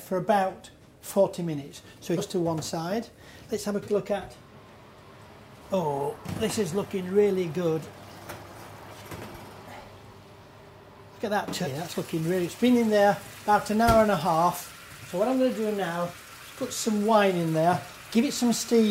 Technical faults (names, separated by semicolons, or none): compressed frames skipped